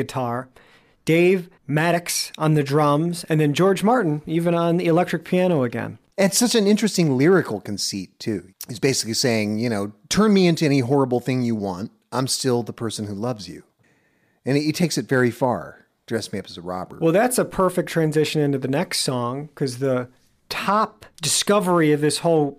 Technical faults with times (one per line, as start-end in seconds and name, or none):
5.34-6.15 block size mismatch (truncated)